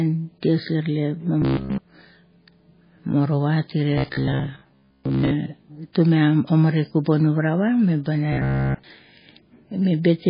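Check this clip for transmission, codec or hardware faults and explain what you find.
Two kinds of fault are audible.

Throughout, heavy watery, swirly smearing with nothing above 5 kHz points to MP3 compression, likely at a low bitrate around 16 kbps, where weak frequency lines are dropped and the treble is cut.

From 1.42 to 1.78 s, 3.98 to 5.31 s and 8.33 to 8.84 s, a rigid metallic 66.8 Hz buzz replaces the speech, completely in the first and last stretches and mostly in the middle one. This is robotic sound from repeated short buffers, likely caused by roughly 15 ms chunks being repeated while the real audio is skipped.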